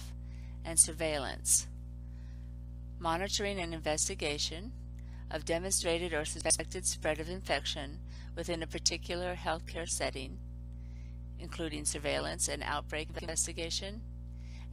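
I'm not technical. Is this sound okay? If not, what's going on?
No. Chunks out of order: twice, at 6.41 to 6.60 s and 13.10 to 13.28 s, a piece of audio about 93 ms long arrived one step late and played after its neighbour. Each spot sounds briefly jumbled.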